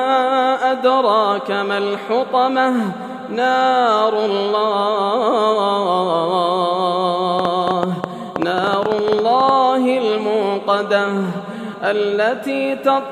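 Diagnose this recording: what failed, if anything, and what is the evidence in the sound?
Train of clicks, 7.39 to 9.5 s: about 9.5 per second, unevenly spaced, well above the sound. Likely analogue interference or a faulty connection or power supply.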